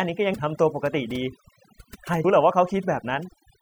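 Throughout the recording the background sinks to near silence dotted with twinkling specks. This is overdone noise removal: a noise reducer set too hard shuts off individual frequency bands near its noise estimate, taking quiet speech detail with them.

At 0.33 s and again at 2.24 s a brief smeared blip marks a jump forward in the speech, roughly 150 ms lost at the first and about 300 ms at the second. These are compressed frames skipped. Jumps of that size point to runs of about five and ten missing 26.1 ms frames, with the overlap between neighbouring frames blurring each join.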